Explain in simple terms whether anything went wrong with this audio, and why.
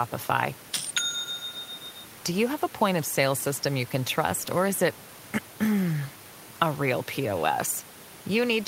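Nothing went wrong with the recording: the speech comes through steady and intact, and the faint background noise of the room, sitting well beneath the talking, is simply the sound of the space around the microphone, not a problem with the equipment.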